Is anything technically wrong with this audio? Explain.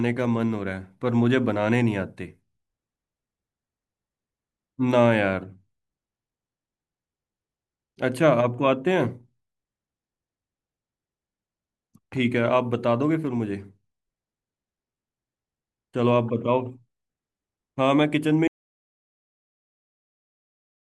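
Yes. At 18.48 s the speech cuts out mid-flow into an audio dropout to silence that lasts to the end, about 2.5 s of silence with no room tone, likely from lost input while recording continued. The waveform flattens completely; the spectrogram goes blank.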